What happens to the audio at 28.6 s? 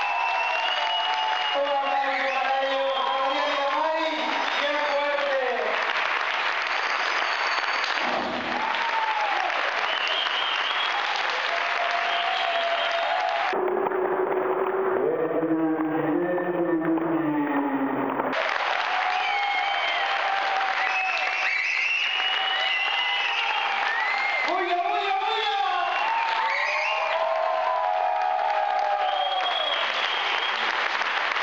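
Nothing goes wrong at 28.6 s; the audio plays through that moment intact, with no dropout, click or distortion.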